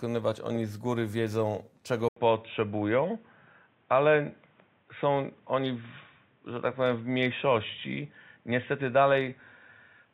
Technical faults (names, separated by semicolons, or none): input switched to a poorer device